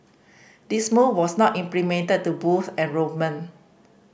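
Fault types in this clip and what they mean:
No faults detected anywhere in the speech.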